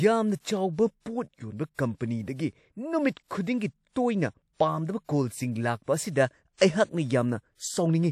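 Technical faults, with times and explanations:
1.74 to 1.79 s, pre-echo: a short hiss rises for about 43 ms just ahead of a sharp speech onset, and the onset itself lands soft and smeared. The codec encoded this stretch as one transform block, so noise scaled to the loud attack was spread back across the quiet moment before it. Unlike reverberation or a true echo, which trail after a sound, this noise arrives before the attack and is masked once the attack begins.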